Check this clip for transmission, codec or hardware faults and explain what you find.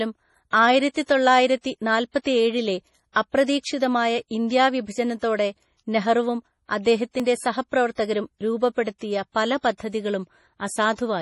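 Two faults are audible in this speech: heavy codec damage throughout, and two brief dropouts.

Throughout, the speech sounds watery and swirly, with chirpy, metallic s sounds and smeared onsets, likely MP3 compression at a very low bitrate, around 32 kbps. Starved of bits, the encoder discards everything above 11.4 kHz and switches weak frequency lines on and off between frames. A spectrogram shows a hard ceiling at 11.4 kHz and flickering, patchy blocks beneath it.

At 2.22 s and 7.20 s, about 5 s apart, the sound skips abruptly. This is likely audio missing between chunks: a fragment of roughly 20 ms is lost as one chunk closes and the next opens, and the edges are butted together. The waveform shows a sudden discontinuity at each point, with no silent gap.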